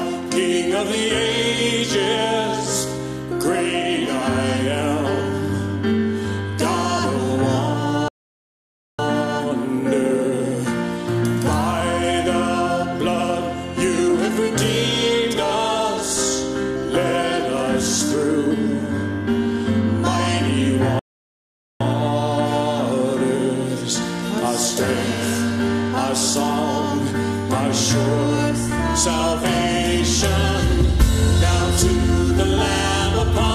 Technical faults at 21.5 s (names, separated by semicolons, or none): rebuffering stall